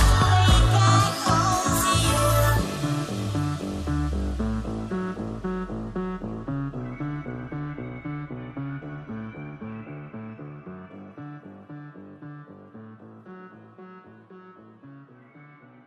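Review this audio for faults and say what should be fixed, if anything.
No faults turn up in this audio, so there is nothing that needs to be fixed.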